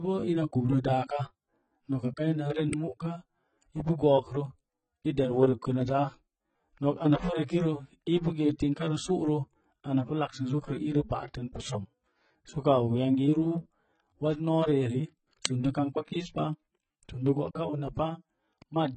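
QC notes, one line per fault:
Throughout: low-bitrate audio saved at a high bitrate. The speech has a hard ceiling with nothing above 9.1 kHz, plus the swirly, smeared texture of heavy perceptual coding. Yet the file is a generous MP3. That combination likely means a very low-rate source, consistent with something like 16 kbit/s AAC, was re-encoded at around 240 kbit/s. The damage belongs to the first encode and can't be undone. A genuinely low-rate MP3 would show its own, lower ceiling and a small file.
2.73 s and 15.45 s: uninitialised buffer. The first event is a loud crack and the second a brief, loud burst of harsh digital noise. The first lasts 0.67 ms and fits a 32-sample block. The second lasts 2.67 ms and fits a 128-sample block. In each case a block was played before real audio filled it, so stale memory came out as samples. What separates this from an ordinary click or dropout is the noisy, sometimes tonal texture inside the burst and its block-sized length.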